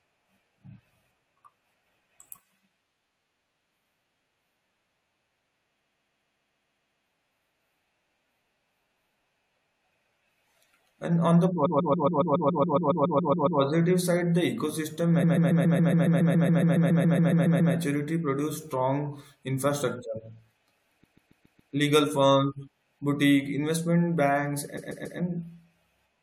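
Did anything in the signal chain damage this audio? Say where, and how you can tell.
Yes, repeated frames at the codec or storage stage. The same 139 ms slice of speech loops at 5.79–7.05 s (9 extra plays), 11.65–13.60 s (14), 15.22–17.73 s (18), 21.03–21.72 s (5) and 24.77–25.18 s (3), each a rapid stutter. The fixed block length fits a run of six compressed frames being re-sent or re-written, so the decoder replays identical data and the clip grows by roughly 6.8 s in total.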